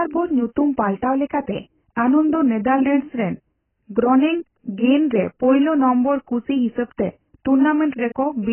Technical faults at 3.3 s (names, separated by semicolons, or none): AAC compression